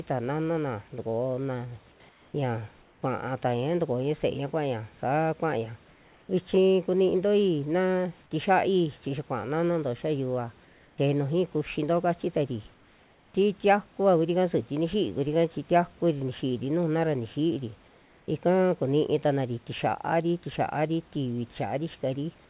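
Speech heard over a call link whose band stops at 4 kHz, fitting G.711 A-law. In pauses at 1.92, 2.09, 2.82, 10.65, 12.74 and 17.88 s, the room hiss turns flat and featureless and dips about 2 to 5 dB, likely comfort noise in place of the background during discontinuous transmission.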